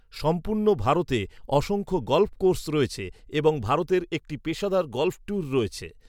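No technical faults can be heard anywhere here.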